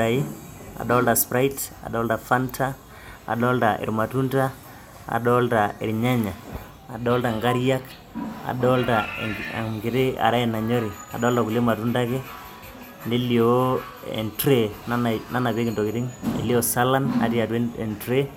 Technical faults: none

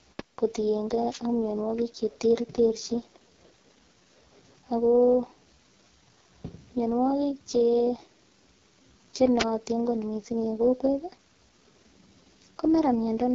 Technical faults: AMR wideband (HD Voice) codec; wireless microphone noise hit

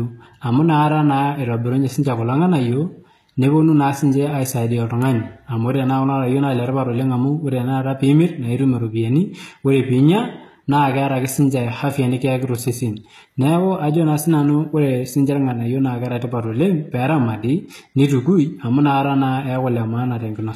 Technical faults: HE-AAC compression

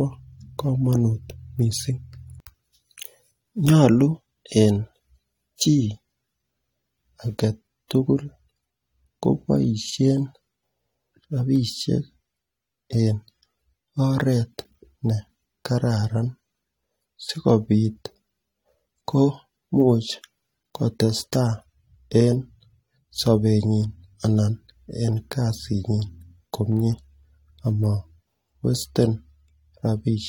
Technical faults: pre-echo

